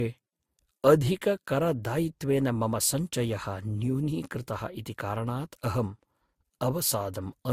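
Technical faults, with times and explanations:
Throughout, transcoding between lossy codecs: the speech carries layered, mismatched artefacts, likely from Opus then Vorbis at about 47 kbit/s, and the spectrogram shows nothing above 16.6 kHz.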